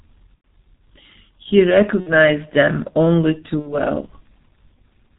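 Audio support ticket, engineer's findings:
G.723.1 codec, whole clip: muffled, hoarse speech, nothing up top past 4 kHz, consonants smeared. Sounds like a slow-updating low-rate voice model, fits roughly 6.3 kbit/s with 30 ms frames. Heavy damage, not subtle.

VoIP packet loss concealed by the speech codec: buzzy stretched tone fading out at 0.35–0.45 s (about 90 ms, fits three frames), 2.00–2.14 s just before "them only too", 3.60–3.80 s right after "them only too". Decoder extrapolating last pitch/filter, gain dropping, slow recovery.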